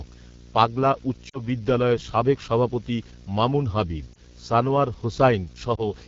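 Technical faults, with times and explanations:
Throughout: video or display buzz. A steady buzz at 59.94 Hz, about 20 dB below the speech, with hash above it and a whine at 15.7 kHz, the line rate. Those two linked rates point to a screen or video cable coupling in, not 50/60 Hz mains hum.
Throughout: AMR wideband (HD Voice) codec. The speech sounds rough and raspy, which fits the low 8.85 kbit/s mode. Its top band is shaped noise above 6.4 kHz rather than a cleanly muffled cutoff, so it is not a narrowband phone codec.
1.29–1.40 s, 4.13–4.23 s, 5.76–5.83 s: lost AMR speech frames. After "পাগলা উচ্চ" about 40 ms of speech is lost, the longest loss, and the sound comes back weak or rough at "বিদ্যালয়ের সাবেক সভাপতি মামুন". Shorter warbles follow "সাবেক সভাপতি মামুন হাবিব" and occur near 5.8 s. The decoder stretches the last pitch and tone and fades them instead of cutting to a hard, silent dropout.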